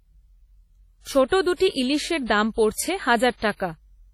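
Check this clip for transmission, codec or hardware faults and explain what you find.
One fault runs through the whole clip. Likely WMA compression near 32 kbps: long transform blocks smear quantisation noise, so the speech rings heavily and sounds washy, with breathing hiss and nothing above 18.2 kHz.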